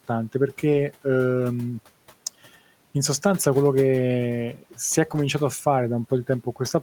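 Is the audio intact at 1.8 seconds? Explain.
Yes, the audio is intact at 1.8 seconds, with only the room's own background noise sitting about 26 dB below the speech.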